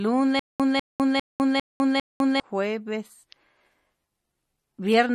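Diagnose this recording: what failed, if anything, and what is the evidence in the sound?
Playback stage: between 0.39 and 2.40 s there's a stutter with silent gaps. A 197 ms burst repeats five times, each followed by 204 ms of dead silence, on a steady 401 ms cycle. That's most likely a stalled stream replaying its last fragment on each retry, and whatever should have played there is gone.

Codec stage: throughout, the speech has plainly audible MP3 compression damage. Nothing remains above 12.6 kHz, and the watery, swirly texture comes from weak frequency lines flickering between frames. It likely points to a starved encoder, which fits a bitrate of around 40 kbps.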